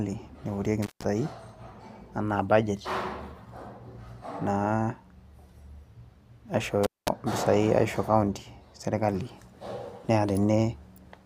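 Intermittent contact at 0.82 to 1.06 s and again at 6.83 to 7.08 s: a loose plug or cable momentarily loses connection, cutting the speech out for about 160 ms, then about 210 ms, with crackle marking each break and faint hiss filling the gap.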